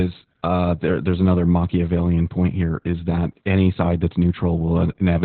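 From start to finish the speech carries Opus voice compression with heavy damage. Nothing survives above about 4.3 kHz, so the band is narrow and muffled, like a phone line. The coder is running its linear-prediction voice mode at a very low rate, likely around 8 kbps. It models the voice coarsely and rebuilds the excitation crudely. That leaves the speech hoarse and slightly robotic.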